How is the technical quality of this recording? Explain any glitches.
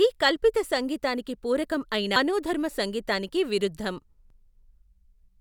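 The recording has two brief glitches, both from damaged data in a compressed stream. At 2.16 to 2.19 s, right after "కల్పిత సంగీతానికి పూరకం అయిన" and before "సంగీతానికి విరుద్ధం", corrupted bytes made the decoder misread frames, lose sync and hunt for the next header. The result is a short blip lasting about 30 ms. The same thing happens at 4.30 to 4.34 s, just after "సంగీతానికి విరుద్ధం".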